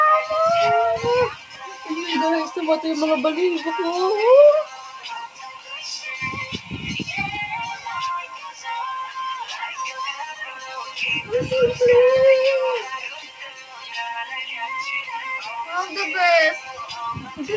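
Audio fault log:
throughout: noise suppressor applied to music or sounds. A speech-oriented suppressor is active on material it was not designed for, so it keeps reclassifying sustained and ambient parts of the sound as noise and pulling them down. The gain it applies moves over a range of around 10 dB, which is heard as pumping and thinning on held sounds while attacks pass largely intact. All of this sits within the G.722 call path's band limit of 8 kHz.
1.3–1.9 s, 4.64–5.1 s, 5.27–5.85 s, 6.52–6.71 s, 8.29–8.66 s, 10.5–10.7 s, 13.15–13.95 s, 16.59–16.84 s: sound cut by the noise suppressor. In each of these stretches the suppressor judged the sound to be noise and attenuated it harder than its surroundings. The deepest drops are about 9 dB at 1.3 s and 5.27 s, about 8 dB at 4.64 s, 8.29 s and 13.15 s, about 7 dB at 6.52 s, about 6 dB at 16.59 s and about 5 dB at 10.5 s. The affected portions sink in level, and decays end early.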